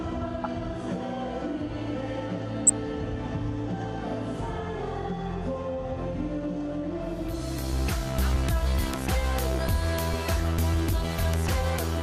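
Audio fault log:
Throughout: MP2 compression. The sound is dull, with upper sub-bands cutting in and out and a coarse, granular gurgle in the bands that remain, plainly audible across the clip. The likely cause is MPEG Layer II coding starved of bits, consistent with about 80 kbps.
0.44–0.46 s, 2.67–2.70 s and 7.28 s: DAB burbling. Short blips of noise occur in single sub-bands. Reception bit errors, on the order of one in a thousand, slip past error correction and corrupt samples in a few MP2 frames.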